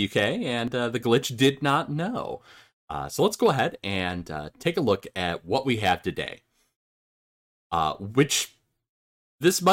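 At 0.68 s the speech has a tiny skip where an overlap between stream segments trimmed a few milliseconds of real audio, making the waveform jump.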